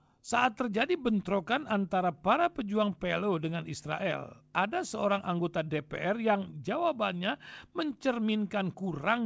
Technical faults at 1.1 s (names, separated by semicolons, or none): none